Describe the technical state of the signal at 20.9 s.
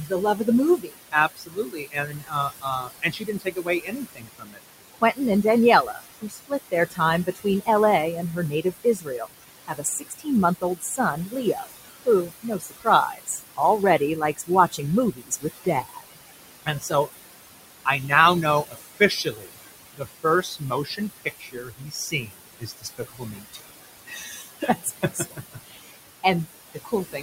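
At 20.9 s the sound falls within a stretch of speech cut by the noise suppressor, running from 17.85 s to the end. The suppressor mistakes soft speech for noise and pulls it down by up to about 21 dB, roughly four seconds in all, so the affected speech sounds swallowed rather than masked. Noise suppressor artifacts are also present: the background, about 11 dB under the speech, is cut by about 19 dB between phrases.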